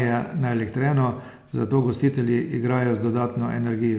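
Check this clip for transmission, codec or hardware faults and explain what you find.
Nothing stood out on listening to this speech recording.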